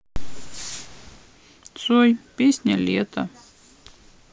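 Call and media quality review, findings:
Nothing to flag on this speech recording; it all sounds fine as far as the ear can tell.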